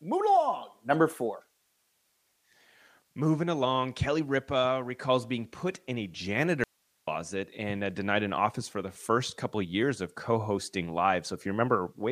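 An audio dropout to a faint residue runs from 6.64 s to 7.07 s, taking out about 0.44 s of the speech. The signal stops abruptly mid-flow rather than fading, and the gap is not silent but holds a low hiss, roughly 45 dB below the speech level, before the speech cuts straight back in. The wanted signal was likely lost upstream while the path after the break stayed live, passing only its own noise.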